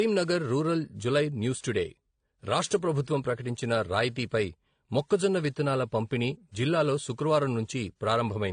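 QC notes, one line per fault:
Throughout: transcoding between lossy codecs. The speech carries the artefacts of one codec heard together with those of another, with nothing above 9.7 kHz. This is likely a WMA stream at around 96 kbit/s re-encoded to AAC-LC at 32 kbit/s.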